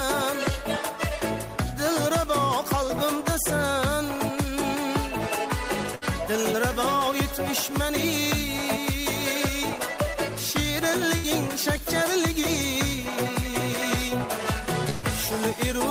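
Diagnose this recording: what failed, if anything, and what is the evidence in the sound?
Burst of packet loss at 5.95–6.04 s, 11.17–11.27 s and 14.90–15.06 s, a network-stage failure. At each point the receiver had nothing to play, so it stretched the last sound and let it fade; the first two fills last about 61 and 63 ms, the third about 128 ms. When the audio returns, it picks up further along, skipping roughly 60, 60 and 120 ms of material that never arrived in time.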